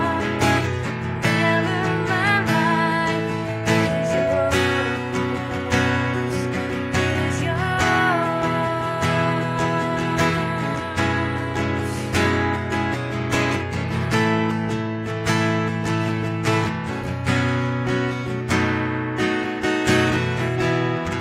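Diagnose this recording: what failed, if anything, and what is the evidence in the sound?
Loudspeaker feedback squeal in the analogue mic-to-speaker loop, 3.06 to 4.57 s: a 658 Hz tone swells over about a second to roughly signal level.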